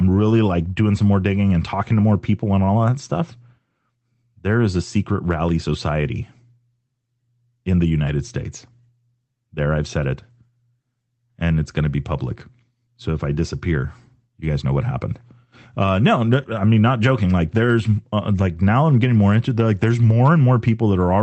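There are no technical faults to describe in this speech recording, which simply carries the ordinary character of an Opus call path.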